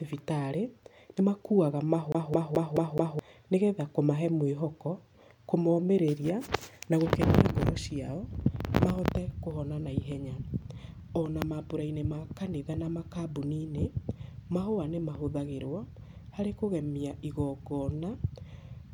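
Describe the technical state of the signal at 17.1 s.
At 17.1 s the speech signal is intact, with no audible technical fault at that moment.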